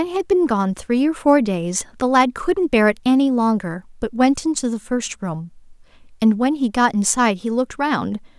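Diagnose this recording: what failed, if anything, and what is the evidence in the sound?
Nothing failed: no stage in the chain, from capture through conversion, processing and playback, leaves an audible defect anywhere in this speech recording.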